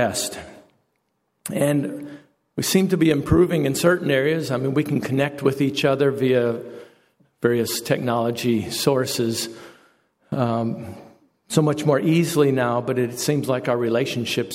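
No technical faults can be heard anywhere.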